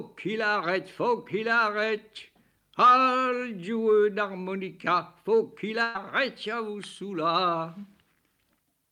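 From 5.83 to 5.98 s there is a burst of packet loss. The last sound is held, fading, for 112 ms. Then 120 ms of audio is skipped.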